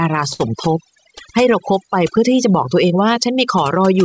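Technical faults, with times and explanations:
Throughout: overdone noise removal. An over-strong noise reducer pulls bands near its noise estimate far down, leaving twinkling near-silence behind the speech.
Throughout: clock drift between sender and receiver. The sender's clock runs about 5% slow, so the jitter buffer keeps draining and the receiver must keep adjusting.
0.10–3.90 s: repeated timing corrections. The receiver repeatedly stretches short pieces, slowing playback to 97% and adding roughly a tenth of a second, at uneven intervals.
0.33–0.41 s: short stall from a late packet. A packet arrived late, emptying the buffer, so the last sound was held 60 ms before continuing unbroken.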